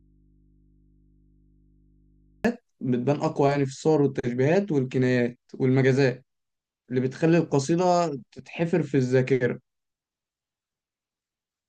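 From the start to 2.45 s only a faint hum, around 35 dB below the speech, is heard: an audio dropout to a faint residue, likely from a signal break leaving an open, live input.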